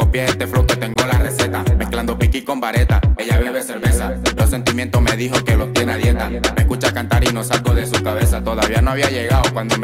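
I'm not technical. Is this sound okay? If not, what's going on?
No, there's one glitch. At about 0.94 s the sound briefly cuts out: that's a block of digital silence, where about 20 ms of the audio dropped to nothing and snapped straight back. It happens when the program doesn't deliver sound fast enough, leaving a tiny gap.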